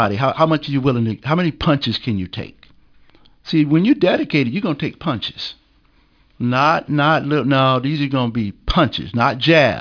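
Throughout the speech, the signal shows aliasing: its rate was cut without an anti-alias filter, in a way that fits a drop from 44.1 kHz to about 11 kHz. Everything above the 5.5 kHz folding point has mirrored back down into the audible band as false, unrelated tones, sitting roughly 25 dB under the speech. Sibilants come across gritty and metallic, and the spectrum stays dense right up to the 5.5 kHz edge instead of rolling off.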